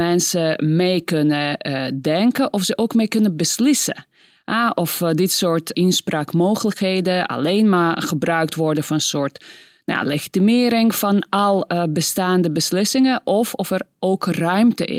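No technical faults can be heard anywhere in the speech.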